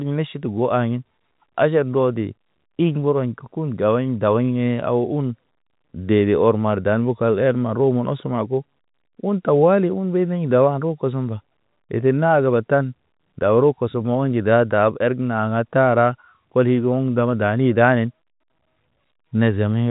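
No faults turn up anywhere in this speech; it just has the narrow, phone-line character of G.711 telephone coding, with nothing above 4 kHz, which fits an ordinary 64 kbps telephone channel.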